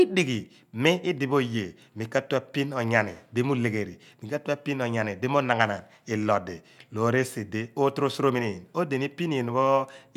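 No technical faults can be heard anywhere in the speech recording.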